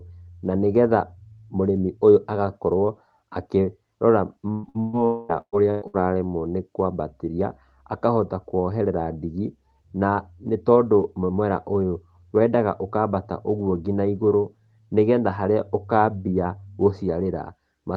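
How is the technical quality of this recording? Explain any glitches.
The recording is damaged by a cluster of transmission gaps between about 4.5 and 6.0 s. The speech runs through a call codec whose band limit near 12 kHz fits Opus at a moderate bitrate.

Burst of packet loss at 4.51–4.66, 4.69–4.77, 4.80–4.96, 5.41–5.55, 5.70–5.84 and 5.87–6.02 s. Roughly 60–120 ms of audio is lost each time, and the receiver stretches the last sound into a fading buzz or hiss. At 5.41 s that fill decays into about 70 ms of silence.

From 5.05 to 5.32 s, a held, fading buzz or hiss of about 240 ms replaces the speech, which resumes further on. This is likely a long network dropout, concealed without reaching silence.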